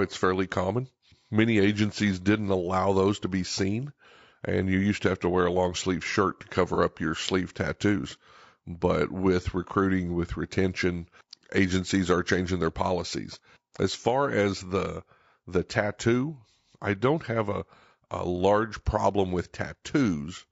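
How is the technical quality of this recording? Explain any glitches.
The recording has plainly audible codec damage throughout and one brief glitch.

Across the whole clip the speech sounds rough and grainy, with noise filling the gaps between harmonics and a thin, synthetic top end. This is likely low-delay AAC compression (AAC-ELD). It codes about 500 frequency lines a frame with a low-delay window, and at a bitrate around 32 kbps that leaves the voice rough.

From 6.74 to 6.78 s, between "long sleeve shirt to" and "up your sleeve tattoos", there is a short smeared, noisy patch. This is AAC frame loss with concealment. The decoder rebuilt the missing audio from the previous good spectrum, consistent with a single lost frame of about 30 ms.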